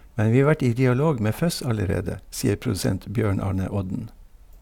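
No technical faults are audible.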